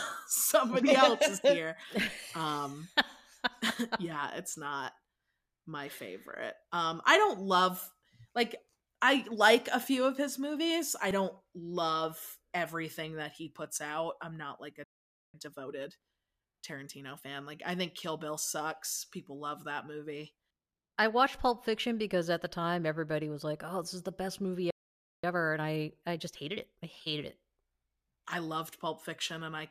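Playback stalls at 14.84 to 15.34 s and 24.70 to 25.24 s cut this speech recording off mid-flow, leaving silences of about half a second (roughly 500 ms and 530 ms). Each gap sounds like the player likely running dry of buffered data or having its output thread blocked, so nothing reaches the output until it recovers and resumes. Time-compressed catch-up follows each stall, from 15.34 to 17.32 s and from 25.24 to 27.34 s. The speech runs at about 1.25 times normal speed with its pitch unchanged. The player is working off the backlog that built up during the silence by removing short slices and cross-fading across the joins, which makes the delivery sound rushed until normal pacing returns.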